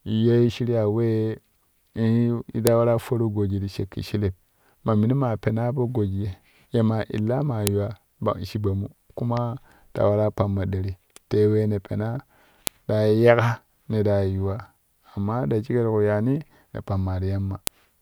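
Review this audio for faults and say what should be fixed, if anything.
The speech was assembled from separate WAV pieces joined or streamed with their headers left in, so each piece's header bytes were decoded as samples: a file header played as audio. The result is a sharp, loud click at 2.67, 7.67, 12.67 and 17.67 s, repeating every 5 s at each piece boundary regardless of what the speech is doing. To prevent it, strip the header from every piece after the first, or concatenate raw sample data and write a single header for the combined file.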